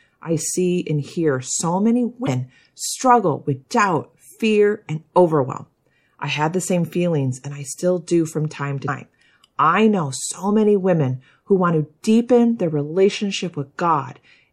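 A speech recording carrying plainly audible MP3 compression throughout: watery, swirling treble and a dulled top end that, unlike a plain low-pass filter, flickers as weak frequency lines drop in and out, likely from encoding at a bitrate around 64 kbps. Damaged data in the compressed stream produces brief glitches at 2.24–2.28 s, between "and hear so many" and "struggle with doubt", and at 8.85–8.89 s, after "still do from time". These are points where the decoder loses sync.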